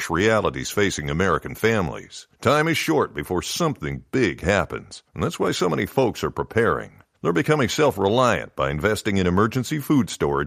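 No technical faults can be heard in this speech recording. Nothing along its length points to a problem at any stage of how it was captured or passed on.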